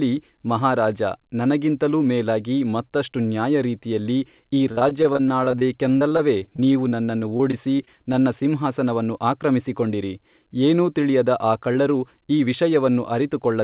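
Repeated packet loss (robotic sound) runs from 4.72 to 8.43 s in this speech clip, between "ಮೇಲಾಗಿ ಮತ್ತಷ್ಟು ನ್ಯಾಯರೀತಿಯಲ್ಲಿ ಈ" and "ಸಿಂಹಾಸನವನ್ನು ಆಕ್ರಮಿಸಿಕೊಂಡಿರಿ ಏನೂ ತಿಳಿಯದ". Packets keep going missing, with gaps up to 48 ms. Each hole is patched by stretching the preceding sound, which gives choppy speech with pieces missing. The sound is band-limited to 4 kHz, which points to a narrowband telephone codec such as G.711.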